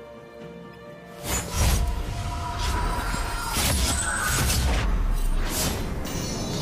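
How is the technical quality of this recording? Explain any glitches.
The recording has two kinds of glitch: some damaged codec frames early on and a double pop around the three-second mark.

The first is a corrupt frame decoded, twice. At 0.73 s, something like a couple of compressed frames had flipped bits, and the decoder played them anyway. Misread gains and codes put energy at the wrong frequencies, giving a tiny blip that sits quiet, around -40 dBFS. At 1.73 to 1.79 s, about three frames go wrong and the error is much stronger, about -20 dBFS, so you hear a chirpy burst.

Then there's a loud pop from 2.99 to 3.17 s, actually two pops in quick succession, roughly 10 dB above the surrounding audio, which keeps going underneath. That's a sudden voltage step or pulse riding on the signal, most likely from a plug, switch, static discharge or driver hiccup, with the downstream circuitry shaping it into a sharp thump.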